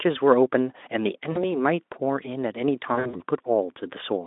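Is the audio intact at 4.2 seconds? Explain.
Yes, the speech is intact at 4.2 seconds, with no fault at that moment.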